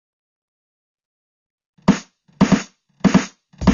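Throughout the music, a doubled audio track is audible: a second full-band copy trails the first by about half a second at roughly equal loudness, likely from the signal being captured twice along a slower path. Unlike an echo or reverb, the copy has no decay or room colour. It is simply the same music again, out of step.

Also present throughout is AAC compression, most likely at a low bitrate around 24 kbps. The damage is plainly audible. The top end is dulled, and sustained tones have a warbling, fizzy smear. The spectral holes and substitute-noise texture set it apart from a clean low-pass filter, which would only dull the top.

At 1.32 s there is a playback stall. The music drops to silence for about 0.12 s and then resumes at 1.44 s, likely because the player ran short of data.

From 1.44 to 1.93 s comes time-compressed catch-up. The music runs at 1.25 times speed while its pitch stays put, because small slices are cut out and cross-faded to clear the backlog. 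The unchanged pitch distinguishes it from a plain faster playback rate.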